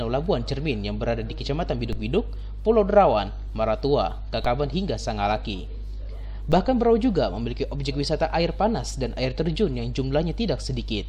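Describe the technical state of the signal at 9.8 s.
At 9.8 s the signal is intact, with no audible fault at that moment.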